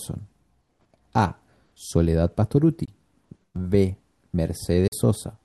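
At 2.85 s the speech cuts to silence for about 20 ms, and at 4.87 s it drops out again for about 41 ms. These are Bluetooth dropouts, likely from audio packets that missed their delivery window and were discarded, one packet's worth and then two. Each gap has sharp edges or a fade of a few milliseconds, and the speech resumes at the point it would have reached anyway. That separates it from an underrun, which delays the audio, and from a click, which adds a spike rather than a hole.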